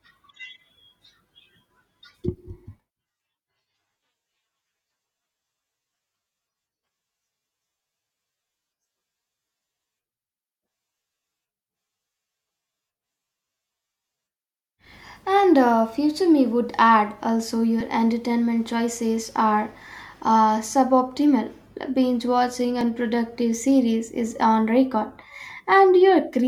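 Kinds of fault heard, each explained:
Overlapping chunks: audio runs in 5-second chunks that start 6.5 ms early, so that bit plays twice, giving quick stutters at 17.81 and 22.81 s.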